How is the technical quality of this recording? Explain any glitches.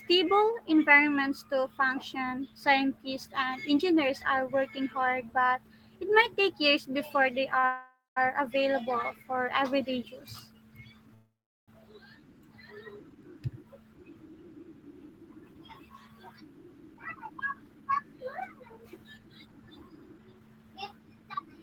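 The recording has clear network-delivery faults: a brief stall, two call audio freezes and a stretch of sped-up playback.

Short stall from a late packet, 7.59 to 7.65 s, right after "take years before they". A packet missed its playout time, so the jitter buffer ran dry and the receiver held the last sound for about 39 ms until data arrived. Nothing is lost, but the sound hangs slightly too long with a faint buzzy smear.

Call audio freeze, 7.65 to 8.18 s and 11.14 to 11.70 s. The first leads straight on from the stall and resumes at "available for everyday". The likely cause is packets held up in transit, leaving the jitter buffer empty. The receiver extended the last sound as a fading buzz and then let it drop away: about 200 ms of silence within the 511 ms gap, and about 400 ms within the 533 ms gap. Playback then continues where it stopped, so a pause is inserted rather than audio lost.

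Jitter buffer speed-up, 14.82 to 21.47 s. After the delays the buffer held more audio than its target, so the receiver trimmed many short pitch-period slices to catch up, roughly 0.4 s in total. Playback runs at about 106% speed with unchanged pitch, and the talking sounds slightly rushed through to the end.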